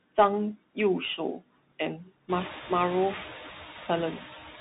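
Speech runs throughout with two faults present from start to finish. The first is noise suppressor artifacts. The background is pulled down by only about 6 dB, so the suppressor trims rather than removes it. In the gaps the residue dips, then swells back under each phrase. That pumping, which follows the speech frame by frame, is what separates it from a steady noise floor or a simple gate that snaps shut. The room noise, which belongs to the recording itself, climbs by about 17 dB at roughly 2.5 s and then sits only about 13 dB below the speech.

The second is the Bluetooth CVSD headset codec. Nothing above 3.8 kHz survives, and the damage is plainly audible. A granular hiss lies under the speech, s sounds turn scratchy, and loud high-pitched moments distort where the one-bit up/down steps cannot keep pace. That character fits a 64 kbps CVSD link. A plain low-pass or narrowband telephone filter would dull the sound without adding this grainy, slope-overload roughness.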